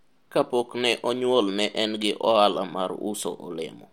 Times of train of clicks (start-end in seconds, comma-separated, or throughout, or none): none